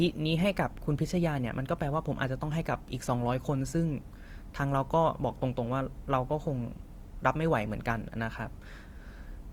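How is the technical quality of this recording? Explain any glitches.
Quality is reduced by plainly audible codec damage. Throughout, the speech sounds grainy and rough despite full bandwidth, likely from Opus compression in music mode filling starved bands with noise, which fits a 24 kbps stream.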